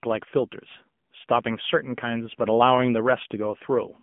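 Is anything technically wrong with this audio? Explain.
Yes. AMR narrowband mobile codec damage runs through the entire clip. The speech has passed through a mobile speech coder that samples at 8 kHz and rebuilds each frame from a vocal-tract model driven by a handful of pulses. The band is confined to roughly 150 Hz to 3.4 kHz, with nothing above 3.6 kHz, and the plainly buzzy, synthetic texture points to a low-rate mode around 7.95 kbps.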